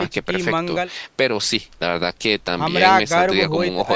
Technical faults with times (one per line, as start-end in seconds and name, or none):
none